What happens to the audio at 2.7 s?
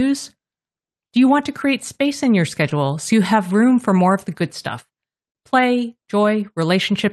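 Right around 2.69 to 2.73 s, between "create space in your" and "so you have room", there's a short concealed packet loss. About 20 ms of the call didn't reach the decoder in time, so the receiver patched the gap by extending the preceding sound for roughly 13 ms and then blending back into the real signal. You hear it as a quick smear or wobble, and a brief consonant there can drop out.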